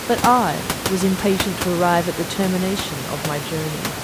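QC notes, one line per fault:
No faults found; the background room noise sits about 10 dB under the speech and belongs to the recording.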